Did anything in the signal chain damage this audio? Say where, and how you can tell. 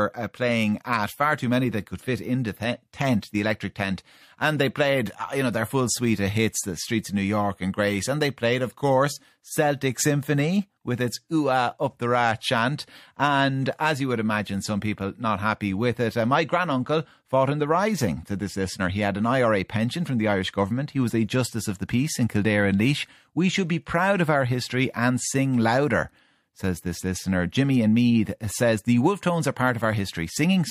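Yes. The damage happened at the codec stage, where a transform coder failed to switch to short blocks for a sharp attack. Just before the attack, from 3.21 to 3.23 s, a brief hiss rises about 13 dB above the surrounding floor in this speech. This is pre-echo. The 20 ms spread fits a transform window of roughly 36 ms, whose quantisation noise, sized for the loud onset, leaked into the quiet lead-in and softened the attack.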